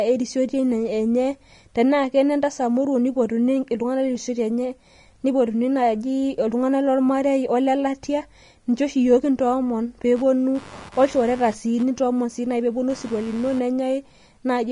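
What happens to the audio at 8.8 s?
At 8.8 s you're hearing the same thing that runs through the whole speech clip, likely Vorbis compression at a low setting, around 32 kbps. Nothing survives above 10.6 kHz, and the coarsely quantised treble turns fine detail into hiss, so everything sounds grainy with roughened tones and smeared attacks.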